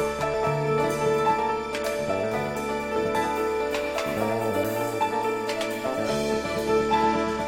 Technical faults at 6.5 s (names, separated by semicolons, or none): none